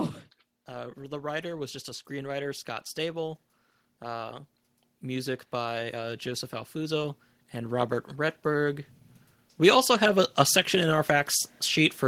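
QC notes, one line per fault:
0.66–3.44 s, 5.01–8.79 s and 9.57–12.08 s, automatic gain rising: three slow swells where the gain control judges the input too quiet and ramps its gain up, by about 6 dB and then about 7 dB, lifting speech and background together.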